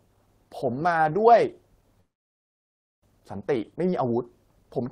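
At 2.00 s the speech halts in a call audio freeze lasting until 3.03 s: a brief continued sound dies into near silence for about one second. The likely cause is delayed packets draining the jitter buffer. Unlike a dropout, nothing is lost; speech resumes exactly where it stopped, about 1 s late.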